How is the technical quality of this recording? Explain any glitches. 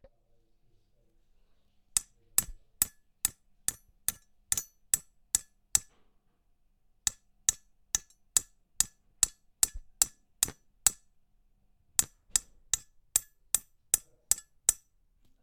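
Nothing goes wrong technically anywhere in this recording.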